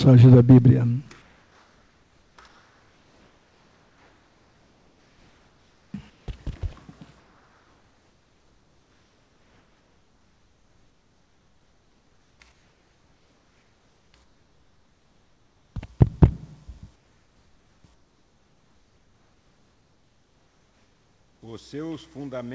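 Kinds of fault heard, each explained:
Comfort noise in place of the background: between sounds the background turns into a flat, featureless hiss about 2 to 3 dB quieter, likely from discontinuous transmission with the receiver filling the gaps with synthetic noise.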